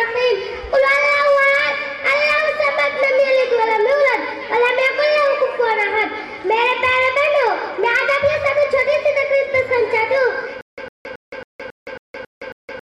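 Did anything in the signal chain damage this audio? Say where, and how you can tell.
Yes: a stutter with silent gaps runs from 10.61 s to the end. A 106 ms fragment repeats eight times, each followed by 167 ms of silence, every 273 ms. This likely points to a playback or stream stall that kept replaying its last buffer, losing the underlying audio.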